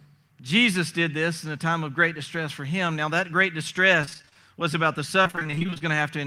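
Repeated packet loss (robotic sound) hits twice: from 4.01 to 4.37 s, between "that great" and "was about the", and again from 5.23 to 5.82 s, just after "was about the". Short stretches of audio kept failing to arrive, each hole no longer than 28 ms, and the receiver filled each one by extending the last sound. About half of each span is patched this way, so the speech turns choppy, with fragments missing.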